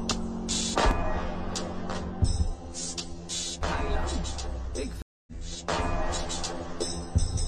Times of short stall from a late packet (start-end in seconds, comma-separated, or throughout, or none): none